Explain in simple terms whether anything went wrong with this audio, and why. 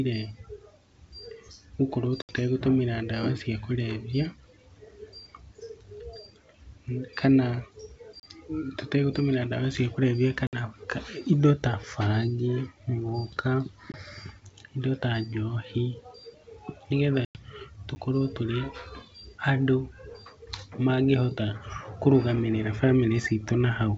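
Two kinds of fault occur in this speech. The first is packet loss on an ADPCM call, at 2.22 to 2.36 s, 10.47 to 10.55 s (after "tũtegũtũmĩra dawa cia kũrevia", before "ka indo ta bangi"), 13.92 to 13.97 s (after "indo ta bangi mũgũka") and 17.25 to 17.41 s. Chunks of 20 to 100 ms vanish into sharp-edged silence. The decoder, having lost track of the sender, brings the speech back slightly distorted for a moment.

The second is a block of digital silence, at 8.20 to 8.23 s, just before "tũtegũtũmĩra dawa cia kũrevia", and at 17.95 s. The audio drops abruptly to silence for about 34 ms and then 10 ms, giving a short hole or tick, as if the output buffer went unfilled in time.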